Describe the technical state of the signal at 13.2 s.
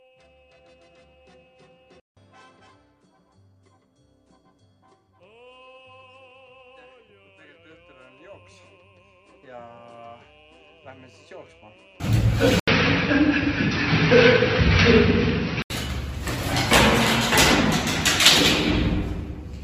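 At 13.2 s the input has likely switched to a poorer device, a state that runs from 12.60 s to 15.70 s. After an 80 ms gap at the switch, the replacement path carries nothing above 5.8 kHz, so the sound turns dull and boxy. Its level also shifts by around 5 dB, and a faint new background noise sits well beneath the signal, giving this stretch its own distinct tone.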